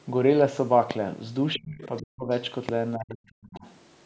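At 0.91 to 0.93 s and again at 2.69 to 2.71 s, a short voltage step, likely from a switch, plug or static discharge, entered the signal path. The following circuitry shapes it into a single pulse, heard each time as a loud pop about 15 dB above the speech, with the talker carrying on underneath.

From 1.57 to 2.29 s, the echo canceller seems to have met both parties talking at once. Unable to separate the local voice from the loudspeaker echo, it likely turned the whole microphone signal down. This speech suppressed in double talk makes the voice sink in pieces by as much as about 40 dB, adding up to roughly half a second of dips. The same happens from 2.96 to 3.64 s, with around 0.7 s of the voice pulled back or dropping out.

During and around those stretches, the canceller likely also failed to strip out all of the far end playing through the talker's loudspeaker. Scraps of the other side's voice leaking through appear at 1.54 to 1.59 s, 1.83 to 2.02 s, 2.31 to 2.40 s and 3.55 to 3.59 s. 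These faint fragments sit about 20 to 40 dB under the speech. Like the rest of the clip, they stay below 8 kHz, the band the call microphone processing passes.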